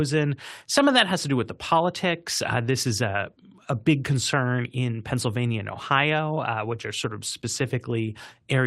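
Listening carefully to the speech, I heard nothing that stood out as a technical fault at any point.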